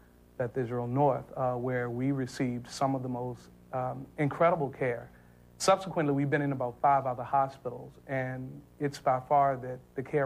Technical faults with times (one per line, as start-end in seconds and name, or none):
none